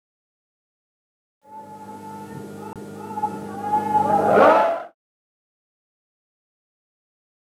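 A CD skip hits the audio at 2.73 s: a short tick, then a brief silence of roughly 30 ms ending at 2.76 s, after which playback resumes from a different point, so the sound jumps abruptly rather than continuing. A knock or a flaw in the disc has made the laser jump onto another turn of the disc's spiral. On a waveform this shows as a near-flat gap with a discontinuity either side; a spectrogram shows a thin vertical click line, a blank sliver, then mismatched content. The clip also fades out smoothly, ending at about 4.95 s.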